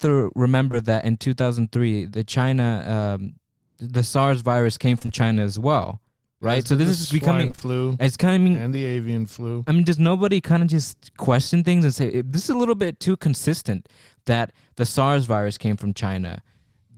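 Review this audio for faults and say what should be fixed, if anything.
A brief smear at 0.71 to 0.75 s, just before "that in", then a short wobbly blur from 4.99 to 5.10 s, right after "virus came", are short concealed packet loss. In each case roughly 20 ms of audio arrived too late or not at all, and the receiver covered the hole by stretching the preceding sound before blending back. At about 5.0 s three such holes fall back to back, which makes that blur longer.

From 7.47 to 7.63 s, right after "right so this is", the sound turns choppy and robotic. This is repeated packet loss (robotic sound). Four separate gaps of about 20 ms each, the longest 23 ms, follow one another so closely that nearly half of that stretch is synthetic fill rather than real audio, leaving a patched, mechanical texture with pieces missing.

To prevent both faults, stabilise the network path and use a larger adaptive jitter buffer with forward error correction, so that late or lost packets are recovered instead of concealed.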